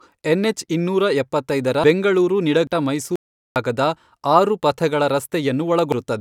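At 1.84 s, just after "ಎನ್ ಹೆಚ್ ಇನ್ನೂರ ಎಪ್ಪತ್ತೈದರ", compressed frames are skipped. The speech jumps forward by roughly 400 ms. The step size fits frames of about 92.9 ms, so around four whole frames never reached the output. The same skip happens at 2.67 s, after "ಹೆಚ್ ಇನ್ನೂರ ಎಪ್ಪತ್ತೈದರ ಬೆಂಗಳೂರು", and again at 5.92 s. Each of those loses about 200 ms, roughly two frames.

From 3.16 to 3.56 s there is an audio dropout to silence. The speech cuts off mid-flow and returns about 0.4 s later. The gap is silent, with no room tone beneath it. Whatever was spoken there is lost. The likely cause is a brief loss of the input signal while silence kept being written.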